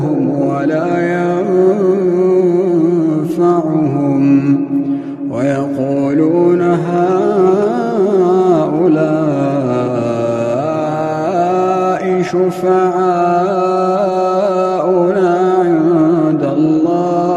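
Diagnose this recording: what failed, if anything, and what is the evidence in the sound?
Nothing in the chain from capture to playback has failed: the signal stays continuous and stable throughout, with no audible disturbance at any stage.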